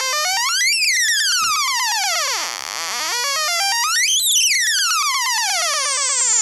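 No technical faults are audible.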